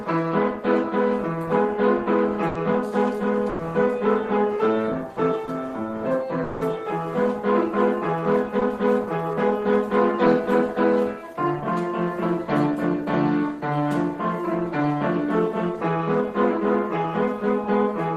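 The audio has packet-loss faults. Bursts of packet loss at 2.47–2.57 s and 3.49–3.61 s each replace about 80 to 100 ms with a held, fading continuation of the preceding sound, and the audio resumes further on with that stretch skipped. Short concealed packet loss at 5.45–5.49 s and 8.59–8.63 s covers only about 20 ms each, heard as a brief smear or wobble rather than an audible hold. At 6.43–6.63 s a fading buzz or hiss lasts about 180 ms before the audio returns further on, never reaching silence. This is likely a long network dropout, and its longer fade sets it apart from the bursts.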